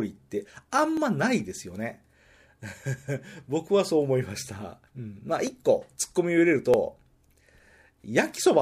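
Speech with three sharp clicks at 0.97, 5.47 and 6.74 s, most likely from dropped samples, each losing about 0.7 ms. The waveform steps abruptly to a later value at each point, leaving a thin vertical line across the spectrogram.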